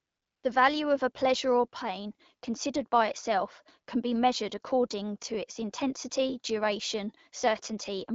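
From 0 to 0.43 s, AMR comfort noise replaces the real background. No speech frames arrive, so a smooth, steady synthetic hiss fills the gap.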